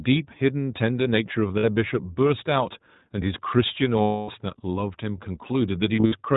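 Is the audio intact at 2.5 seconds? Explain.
No, iLBC codec damage runs through the whole clip, including 2.5 s. Independently coded frames, fitting 20 ms at 15.2 kbps, leave speech rough and synthetic. A spectrogram shows nothing above 4 kHz.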